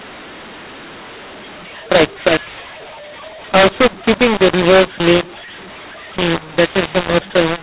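From the first moment to the end, the speech carries a mu-law and A-law mix-up: the 8 kHz G.711 stream was coded as A-law but decoded as mu-law, so every 8-bit code maps to the wrong level. Loud and soft passages swap proportions unevenly, giving a gritty, harsh distortion, while pauses fill with a noise floor instead of silence. Unlike clipping, the roughness stays present at all levels, including the quietest gaps.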